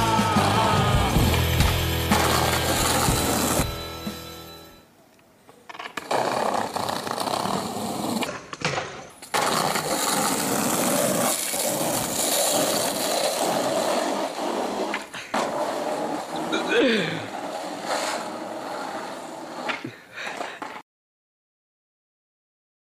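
No technical faults can be heard anywhere here.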